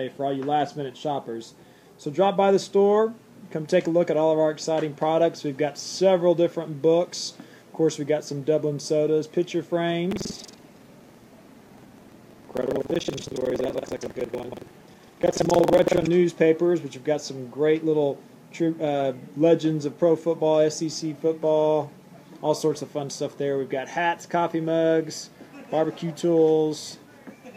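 From 10.08 to 16.11 s, buffer tearing splices stale audio into each period. This gives a 21.5 Hz robotic rattle, which fits a 2048-sample buffer.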